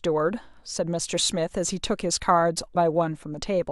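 At 2.74 s the speech breaks into a brief glitch lasting about 12 ms. This is damaged data in a compressed stream: corrupted bytes there make the decoder misread the affected frame and lose sync until it locks onto the next valid frame header.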